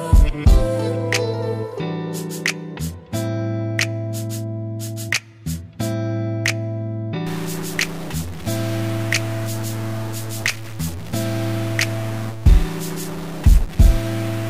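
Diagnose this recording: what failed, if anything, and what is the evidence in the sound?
A stuck bit appears from 7.27 s to the end. The stage is most likely the converter or a broken data line feeding it, with one bit held fixed. About half the samples shift by a fixed step of roughly -30 dBFS, following the waveform, so the sound turns harsh and buzzy. Quiet passages fill with noise, because near zero the fixed bit's effect changes with the sign of the signal.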